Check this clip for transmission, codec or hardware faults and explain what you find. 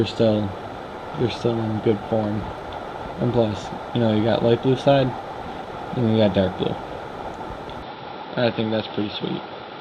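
An input switched to a poorer device, from 7.82 s to the end at 9.81 s. The sound abruptly loses everything above 5.6 kHz, turning dull and boxy with no gap at the switch and no level jump, most likely because recording moved to a narrower-band microphone that adds a faint background noise.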